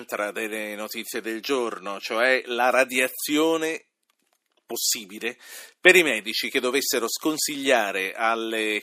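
No faults detected in the speech at any point.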